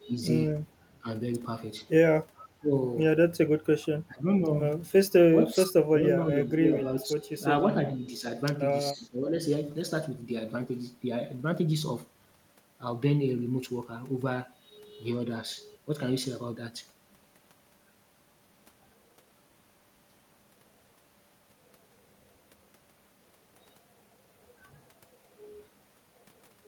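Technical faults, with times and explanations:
0.00 to 9.35 s, speech suppressed in double talk: the voice dips, thins or breaks into fragments at 0.00–0.14, 1.01–1.07, 2.56–2.71, 4.08–4.49, 5.39–8.25 and 8.93–9.35 s. The deepest cuts are about 25 dB at the start and about 20 dB later. The 5.39–8.25 s stretch loses roughly a second and a half in pieces. The likely cause is an echo canceller that could not separate this talker from far-end loudspeaker echo while both sides spoke, so it attenuated everything.
2.37 to 2.47 s, echo leak: a faint delayed copy of the voice returns about 428 ms after the original, at about 25 dB below the speech, as a brief scrap rather than a sustained repeat. This is likely residual echo that a loudspeaker endpoint's canceller failed to remove from its microphone signal and sent back. The long delay makes it audible as a separate ghost instead of added reverberation.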